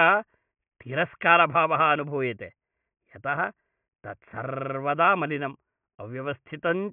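No technical faults are audible.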